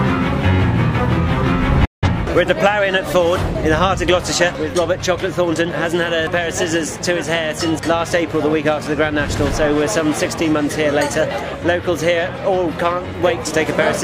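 At 1.85 s the sound fades out within about 8 ms and stays silent until 2.08 s, a digital broadcast dropout where the receiver muted over what sounds like a few corrupted frames.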